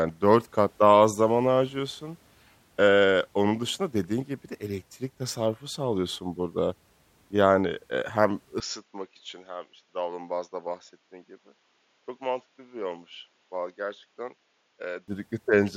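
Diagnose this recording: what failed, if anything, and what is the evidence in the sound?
Right after "eee hem", at 8.6 s, the speech abruptly turns dull and quieter by about 10 dB, losing everything above 7 kHz over a faint new background noise, until 15.08 s. At the capture-device stage, the input likely switched to a poorer, narrower-band device.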